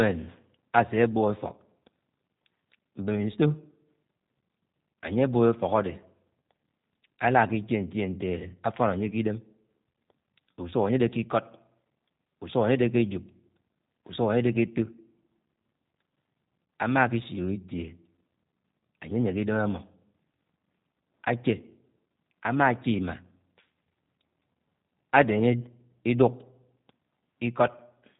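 From start to finish the speech carries plainly audible G.729 codec damage, with the sound pointing to a G.729A stream at around 8 kbit/s. Each 10 ms frame is rebuilt from a vocal tract filter, a pitch predictor and a handful of pulses, so the voice comes out slightly rough and synthetic. A spectrogram shows energy ending abruptly at 3.8 kHz, with blank space above, and smeared, buzzy harmonics below.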